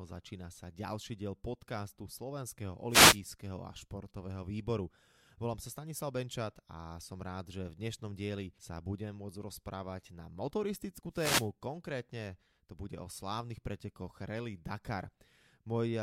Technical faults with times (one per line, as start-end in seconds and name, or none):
2.89-3.19 wireless microphone noise hit
11.12-11.49 wireless microphone noise hit